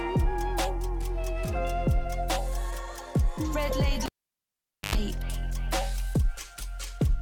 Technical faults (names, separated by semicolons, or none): cable pulled and plugged in